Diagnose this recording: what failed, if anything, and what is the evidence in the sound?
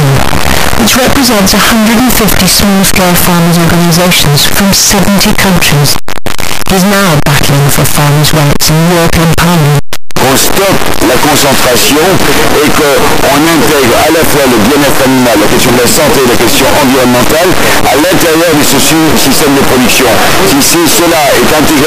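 Signed and unsigned mixed up at the sample-format conversion stage, throughout: harsh, very loud distortion where quiet passages match loud ones. Likely cause: 8-bit samples read with the wrong signedness, so every zero crossing leaps full range. The waveform shows a near-full-scale slab, the spectrogram a dense broadband smear.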